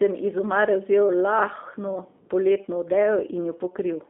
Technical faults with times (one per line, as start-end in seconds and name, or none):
0.00-4.09 G.729 codec